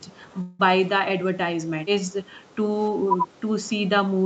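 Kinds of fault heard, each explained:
Echo leak: A very faint, delayed copy of the speech can be heard in the first few hundredths of a second, from 0.01 to 0.05 s, trailing the original by 310 ms and sitting far below it. The likely cause is the far end playing the call on a loudspeaker, with its echo canceller failing to remove everything its microphone picked up. The leftover scrap was sent back down the line.
Call audio freeze: From about 0.41 to 0.61 s the sound stalls, and the last moment is stretched into a short, fading buzz or hiss for 178 ms. Then the speech picks up exactly where it stopped, with nothing lost. This likely comes from packets being held up in transit so that the jitter buffer ran dry. The receiver filled the wait with synthetic sound, so everything after it arrives 178 ms later.
Speech suppressed in double talk: The speech suddenly sinks twice. The first dip, from 1.72 to 1.82 s, is deep. 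The second, from 3.05 to 3.28 s, is milder. This is likely the echo canceller reacting to both sides talking at once. It could not separate the near talker from the loudspeaker echo, so it turned the whole signal down until the overlap passed.
Background gated by the echo canceller: Between roughly 2.41 and 2.56 s, the room sound behind the speech briefly sinks by about 6 dB and then returns. The echo canceller clamped down on the microphone while the loudspeaker was playing, treating the ambience as possible echo. The background came back as soon as the canceller released its hold.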